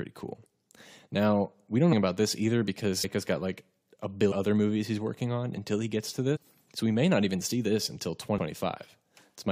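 Compressed frames skipped in this speech recording at 1.92–1.94, 3.03, 4.31–4.33, 6.35–6.37 and 8.37 s. Roughly 150–200 ms of audio drops out each time, consistent with several missing or rejected frames of about 23 ms, and each time the audio jumps ahead.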